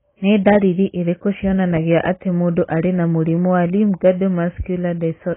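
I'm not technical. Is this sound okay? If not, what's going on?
No. The speech sounds muffled and smeared throughout, with a watery, warbly edge on drawn-out sounds and on s and sh sounds. Nothing comes through above about 3.8 kHz, so the crispness and air are gone. This is heavy damage, likely from AAC compression squeezed very hard: the encoder threw away the high frequencies and coarsely approximated what remained, leaving the swirly, hollow texture you can hear.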